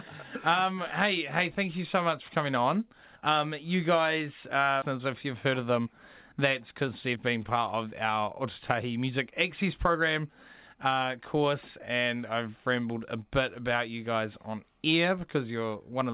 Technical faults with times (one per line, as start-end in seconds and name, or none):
4.82 skip ahead
4.92-10.30 jitter buffer speed-up
10.75-11.50 jitter buffer speed-up